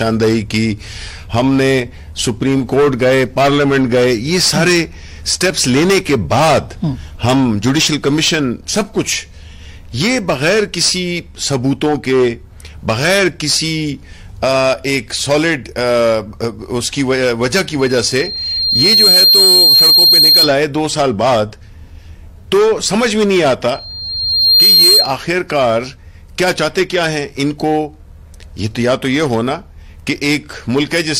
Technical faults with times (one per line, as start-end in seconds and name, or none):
17.79-20.54 loudspeaker feedback squeal
23.73-25.14 loudspeaker feedback squeal